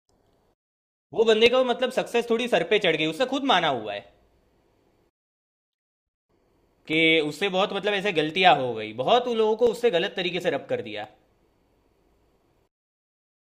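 Clock drift buffer slips from 1.46 to 12.41 s: about ten clicks every 1.37 s, likely two clocks roughly 300 ppm apart, forcing small sample blocks to drop or repeat.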